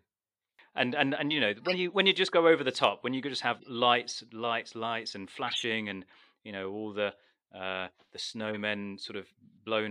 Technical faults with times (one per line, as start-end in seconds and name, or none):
1.57-1.74 corrupt frame decoded
3.57-3.68 corrupt frame decoded
5.47-5.64 corrupt frame decoded
7.11-7.18 corrupt frame decoded
8.48-8.60 corrupt frame decoded